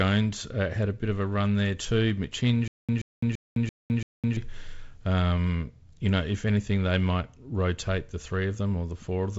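From 2.68 to 4.37 s, a stutter with silent gaps: a 129 ms fragment repeats five times every 338 ms with 208 ms of digital silence, likely a stalled stream retrying.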